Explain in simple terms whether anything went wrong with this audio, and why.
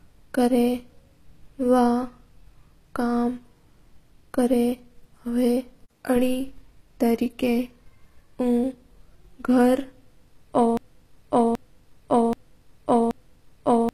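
HE-AAC compression, throughout: the speech has a gritty, metallic treble and lispy s sounds, likely from a codec rebuilding the high end by copying lower tones upward.

Broken-record loop, from 10.77 s to the end: a 0.78-second piece repeats four times back to back, likely because playback stalled, so the speech that belonged there is lost.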